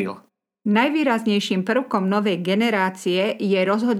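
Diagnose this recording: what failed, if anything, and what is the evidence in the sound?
Nothing in this speech recording points to a failure at any stage of the chain. No stage shows a defect to diagnose, so there is no mechanism to trace.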